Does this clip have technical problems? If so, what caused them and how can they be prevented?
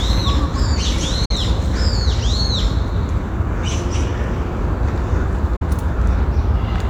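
Yes, there are two digital broadcast dropouts, at 1.25 s and 5.56 s. Each time the receiver mutes after a fast 8 ms fade and returns about 0.1 s later. Roughly 43 ms of audio vanishes each time, which fits one corrupted frame. A stronger, cleaner signal and better antenna placement would prevent it.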